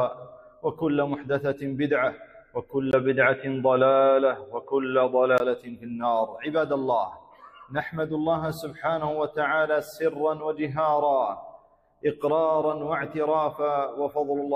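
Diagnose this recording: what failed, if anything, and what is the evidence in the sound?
The input path failed at the driver or device-routing stage. From 2.91 to 5.4 s the sound turns dull and boxy, with nothing above 3.8 kHz, a level shift of about 5 dB, and a faint new noise floor roughly 55 dB down. A 20 ms gap at 2.91 s marks the changeover. This is likely an input switched to a poorer device. On a spectrogram the upper band is cut off sharply across that stretch, and the waveform shows a brief dropout and a step in amplitude.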